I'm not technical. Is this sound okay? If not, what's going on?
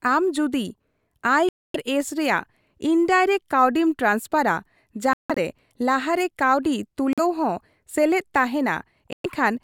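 No, the speech cuts out four times, at 1.49–1.76, 5.13–5.38, 7.13–7.19 and 9.13–9.26 s, then resumes further along. That's likely a Bluetooth dropout, with wireless audio arriving too late and being skipped.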